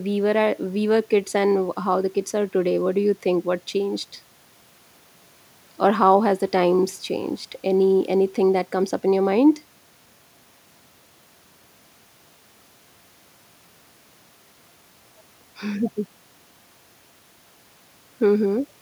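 Nothing in this speech recording stands out as a technical fault; there's no moment where anything goes wrong in the audio.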